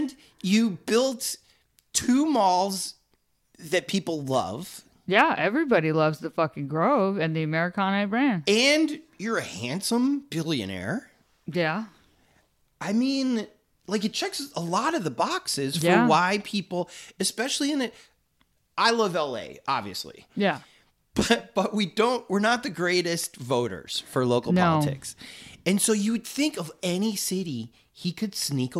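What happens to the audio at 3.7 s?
Nothing goes wrong at 3.7 s; the speech plays through that moment intact, with no dropout, click or distortion.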